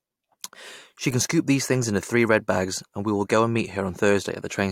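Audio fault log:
No technical faults are present in the clip.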